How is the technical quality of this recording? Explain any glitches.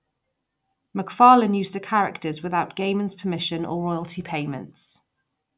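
The technical quality of this recording shows no glitches to explain.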